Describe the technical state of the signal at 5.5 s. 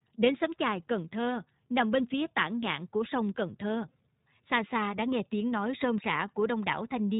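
At 5.5 s the signal is still passing through the iLBC codec, which affects the whole clip. The coder cuts everything into short blocks, consistent with 20 ms frames at a 15.2 kbps mode, and codes each block's excitation independently. It also limits the band to narrowband. Nothing above about 3.8 kHz survives, so the speech sounds boxed-in and telephone-like, with plainly audible roughness and a slightly synthetic texture.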